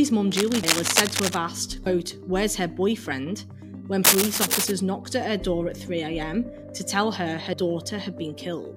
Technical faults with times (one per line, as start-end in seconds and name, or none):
0.32-1.38 cable scratch noise
4.04-4.71 cable scratch noise
7.53 compressed frames skipped